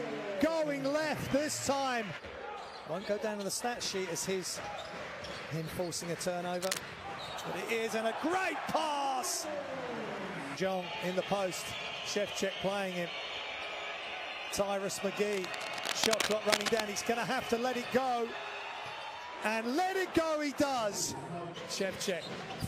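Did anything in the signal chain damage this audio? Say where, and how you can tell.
Yes. Two bursts of cable scratch noise, from 6.61 to 6.78 s and from 15.33 to 16.83 s, point to the analogue wiring stage. Each is a dense, irregular crackle and rustle, roughly as loud as the sound itself. The first is a short flick and the second lasts about one and a half seconds. The likely cause is a worn connector, cable or control being moved, so that its contact resistance fluctuates rapidly and injects that ragged noise into the signal.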